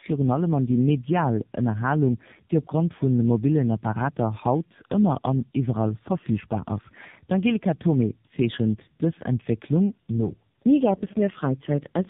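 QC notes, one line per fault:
Throughout: tandem speech coding. The speech sounds rough, muffled and warbly, which points to two low-rate speech codecs in a row, with an AMR-NB stage last. Each coder re-models the previous one's already degraded output, so the errors compound. On a spectrogram, energy stops at a hard ceiling near 3.8 kHz, harmonics look smeared and patchy, and formant tracks blur. The waveform shows softened, irregular pitch periods.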